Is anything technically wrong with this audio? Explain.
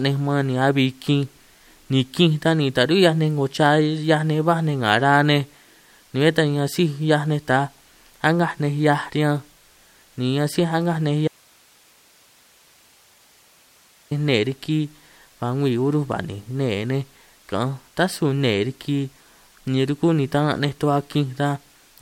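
Yes. From 11.28 to 14.11 s the speech suffers an audio dropout to a faint residue: it cuts abruptly and leaves only hiss, roughly 35 dB down, for about 2.8 s. The likely cause is a brief loss of the signal while the downstream path stayed live. The waveform collapses to a thin band, and the spectrogram shows a flat, faint noise floor between two hard vertical edges.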